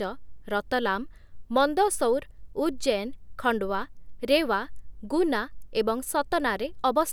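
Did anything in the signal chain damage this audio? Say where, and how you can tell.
No, none of the stages in the chain left any audible damage on this speech recording.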